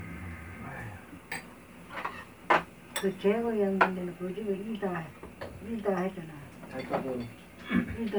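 Repeated lossy encoding runs through the whole clip, most likely generation loss from the sound being passed through MP3 around five times at what sounds like 128 kbit/s. Each pass requantises on a shifted frame grid, so these sounds turn swirly and hollow, attacks blur, and nothing reaches above 20.1 kHz.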